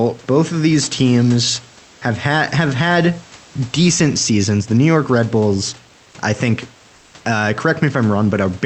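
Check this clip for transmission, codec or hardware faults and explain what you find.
One transmission fault: comfort noise in place of the background, from 6.95 to 7.13 s, right after "I think". The sender likely stopped transmitting during this pause under Opus discontinuous transmission, so the receiver filled about 180 ms with synthetic noise. The room's own background, audible about 29 dB below the speech, briefly turns into a flat, featureless hiss about 1 dB quieter.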